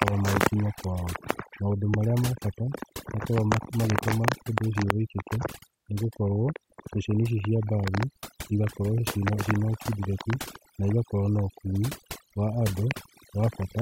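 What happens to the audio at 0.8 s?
At 0.8 s the speech is under overdone noise removal, which runs through the whole clip. The denoiser was set too aggressively, so it pulls individual frequency bands down or out whenever they sit near its noise estimate, taking quiet parts of the voice with them. The background drops and breaks up into twinkling specks. A spectrogram shows a blotchy, gappy pattern with isolated bright dots scattered across otherwise empty gaps.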